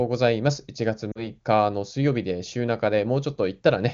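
At 1.12 s the speech briefly smears and sags as lost AMR speech frames hit. About 40 ms of data, which fits two 20 ms frames, failed to decode. The wideband AMR decoder filled the gap by repeating the last good pitch and vocal-tract shape at falling gain, so the sound stretches and fades before clean speech returns rather weakly by 1.27 s. On a spectrogram, harmonics run flat and dim through that span. The waveform envelope dips, and the band up to 7 kHz from the wideband codec thins out.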